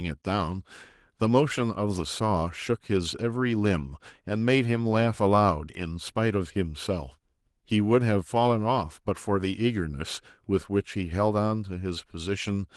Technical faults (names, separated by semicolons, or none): none